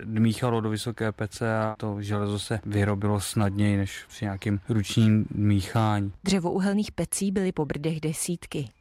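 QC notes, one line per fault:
Throughout: sample clock jitter, unsteady sampling times err on steep slopes, so roughness about 40 dB down tracks loud, bright speech and vanishes in pauses.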